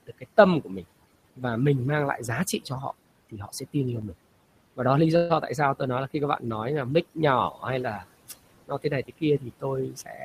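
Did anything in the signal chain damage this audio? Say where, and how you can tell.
Yes. The noise removal in the call processing stage is set too hard throughout. Bands near the noise estimate are driven almost to nothing, leaving near-silent gaps with twinkling specks. Unlike ordinary suppression, the damage reaches the speech itself, not just the gaps.

Noise suppressor artifacts run through the whole clip. The steady room noise, which sits about 18 dB below the speech and is not itself a fault, is pushed down by about 18 dB between phrases and rises back under speech. That pumping residue marks frame-by-frame gain, not a fixed filter.

Speech is cut by the noise suppressor at 0.03–0.85 s (about a fifth of a second affected, dips of about 19 dB), at 7.51–7.63 s just after "nói là mic" (about 11 dB), and at 8.67–10.24 s (about 17 dB). Soft sounds and endings vanish with the background, not with a clean dropout.

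A call audio freeze sits at 5.16–5.32 s, between "và đó lý" and "tại sao tôi nói". About 135 ms of fading continuation fills the gap, then speech resumes where it stopped with nothing missing. That points to late packets and a jitter buffer running dry, likely network delay, not lost data.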